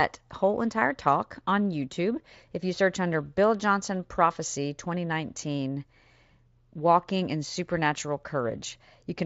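No technical faults can be heard in this speech.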